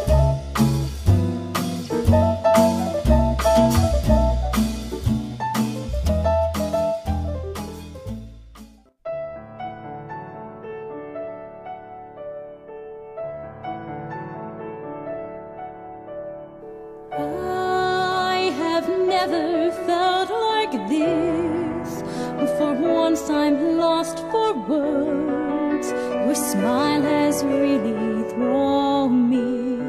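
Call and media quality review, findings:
No findings in this call and media quality review.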